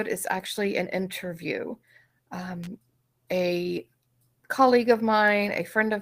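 A nearby switch, motor or static discharge likely threw a brief electrical arc that the audio line picked up, producing an electrical switching spike from 2.64 to 2.67 s in the speech. It lands as a sharp snap or tight burst of clicks riding on top of the sound for about 30 ms.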